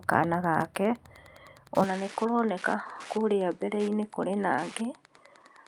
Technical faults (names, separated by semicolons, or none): Wi-Fi interference; input switched to a poorer device